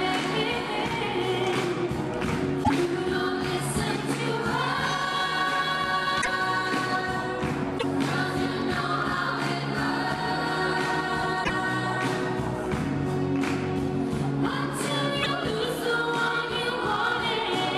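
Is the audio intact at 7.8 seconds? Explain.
No. From 7.77 to 7.84 s the sound skips ahead and the next 70 ms come out as a brief garbled disturbance. The likely cause is a broken MP3 bit reservoir. After frames were dropped, the following frames reached back for borrowed data and decoded bytes from the wrong frame instead. The span fits two to three frames of about 26 ms each.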